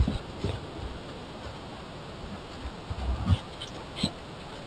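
Throughout the speech there is imaging from linear upsampling. The rate appears to have been raised from a 12 kHz source by joining samples with straight lines, a weak filter. Above the dulled top of the band, a mirrored copy of the spectrum sits between 6 and 12 kHz at about 25 dB down, heard as a faint metallic shimmer on sibilants. Unlike aliasing, nothing folds down inharmonically into the main band, and unlike a plain low-pass it adds energy instead of only removing it.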